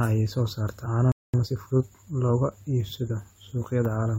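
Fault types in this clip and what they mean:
Playback stall: The player was likely starved of data or blocked, so the speech cuts out after "ayaa soo saarta" at 1.12 s, silent for about 0.22 s.
Time-compressed catch-up: The player then trims its backlog by splicing out small pieces, so from 1.34 to 2.2 s speech runs 1.25 times fast, pitch unchanged.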